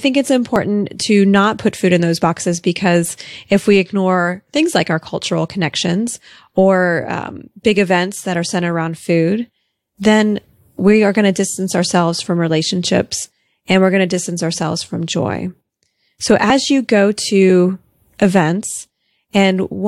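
At 0.56 s and again at 16.5 s there is an overlap between stream segments. Two adjoining segments claimed the same stretch of time, so the player trimmed away audio that had never actually been duplicated, about 6 ms at the first point and 13 ms at the second. Each is heard as a short click or hitch in the speech. On a waveform the trace jumps abruptly at each spot, and a spectrogram shows a thin vertical broadband line. The timing fits 2-second segments.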